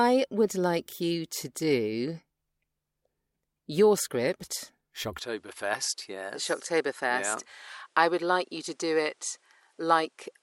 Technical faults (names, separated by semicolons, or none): input switched to a poorer device